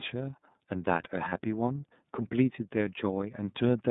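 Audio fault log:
Throughout: iLBC codec. Narrowband coding, with a spectrogram empty above about 3.7 kHz and thin below 150 Hz, leaves this speech plainly rough and synthetic, consistent with 30 ms frames.
1.28–1.33 s: lost iLBC frames. One 30 ms frame was rebuilt by repeating the last pitch cycle with noise, shown as a short uniform periodic waveform stretch, heard as a buzzy held vowel.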